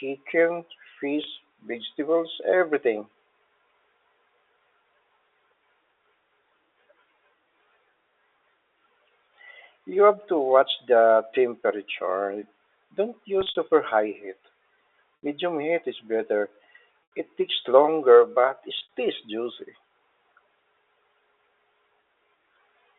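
Packet loss with pitch repetition hits at 1.24 s, 13.41 to 13.55 s, 15.23 s, 17.12 s and 18.79 to 18.92 s. Each time, 30 to 110 ms of speech is lost. The receiver loops the last pitch period to fill the gap. The 30 ms gap sounds briefly held and buzzy. Longer gaps fade toward silence.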